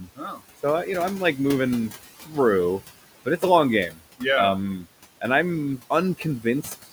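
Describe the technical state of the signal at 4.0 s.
Right at 4.0 s you're at the tail of a stretch of speech cut by the noise suppressor, running from about 3.89 to 4.0 s. The suppressor mistook a soft bit of the speech for background and pulled it down by about 12 dB at its deepest, so roughly a tenth of a second sounds swallowed and faint.

Underneath that, the noise suppressor artifacts run through the whole clip. The suppressor is ducking the steady room noise, which sits about 15 dB below the speech, by about 17 dB frame by frame. You hear the background dip and swell around the speech.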